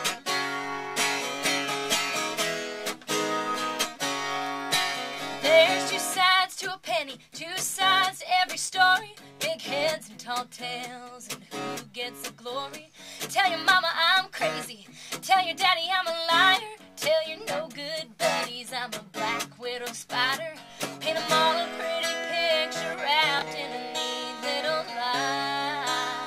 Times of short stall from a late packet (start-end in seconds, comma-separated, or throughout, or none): none